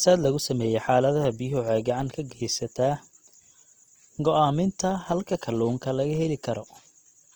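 From start to finish, the speech carries plainly audible coding damage. The tone is rough and grainy rather than swirly. Tones sound noisy, as if filled in with hiss. This is likely Opus compression in its music (CELT) mode. The texture fits a low rate of about 24 kbps. The encoder keeps each band's energy but rebuilds fine detail by folding lower bands or adding noise. The bandwidth stays full, reaching 20.2 kHz.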